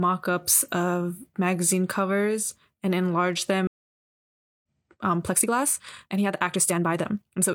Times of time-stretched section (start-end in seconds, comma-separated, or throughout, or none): 5.19-7.54